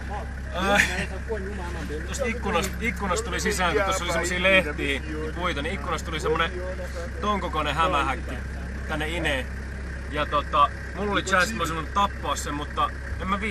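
From start to finish the sound is dull and gurgly, with granular grit; that's likely MP2 compression starving upper sub-bands, and it fits a low bitrate around 80 kbps.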